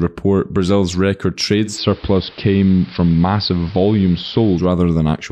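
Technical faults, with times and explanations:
1.63–4.69 s, digital radio blending to analogue: the receiver cross-fades over about 165 ms into the AM broadcast and back, so the speech turns dull and gains a hiss roughly 25 dB down at unchanged level; a spectrogram shows the treble thinning, with a noise floor beneath.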